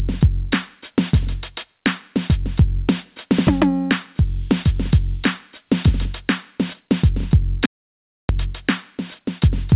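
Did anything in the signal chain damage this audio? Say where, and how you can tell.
Yes. Gain pumping sits at the input stage. Throughout the music, loud and soft parts end up closer in level and the sound is squashed, with the gain swinging around 20 dB. The likely cause is input gain set far too high with a fast limiter clamping every peak. Slow automatic gain control would drift over seconds rather than tracking each loud hit.

An audio dropout to silence runs from 7.66 to 8.29 s, losing about 0.64 s. The music stops and resumes mid-flow, and the gap is silent with no room tone, likely an input that disconnected while the recorder kept writing silence. A network loss concealed by the codec would leave noise or smeared sound instead.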